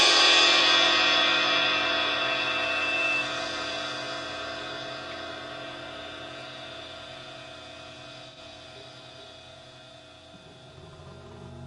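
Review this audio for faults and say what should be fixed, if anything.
Loudspeaker feedback squeal runs from 1.31 to 3.36 s: a microphone is picking up the loudspeaker it feeds, and at 2.7 kHz the loop gain exceeds one, so that tone reinforces itself and swells over roughly two seconds until it sits at about the same level as the wanted sound. On a spectrogram it shows as a single bright horizontal line at 2.7 kHz that thickens and brightens. In the waveform the envelope fills out into a dense, steady sinusoidal band. To prevent it, lower the monitor gain, move or aim the microphone away from the loudspeaker, or notch 2.7 kHz with a feedback suppressor.

AAC frame loss with concealment occurs from 8.29 to 8.38 s. About 85 ms of coded audio is missing, which fits two lost frames, and the decoder patches the gap by reusing the last good spectrum with altered phase and energy, giving a brief smeared, noisy, phasey blur. 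On a spectrogram it appears as a short vertical band where fine detail is replaced by a smoothed, repeated spectral pattern. In the waveform the section looks blurred, with no clean transients. To prevent it, make the transmission or storage path reliable, or add error protection or retransmission so frames are not dropped.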